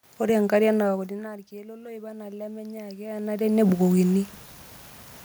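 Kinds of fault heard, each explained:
Automatic gain rising: the level into the microphone drops by about 19 dB around the time the talker shifts position, and the gain control reacts by slowly pushing its gain up by about 8 dB between 0.87 and 3.52 s. You can hear the speech and the room noise swelling together over those two and a half seconds, so the background gets louder right along with the voice.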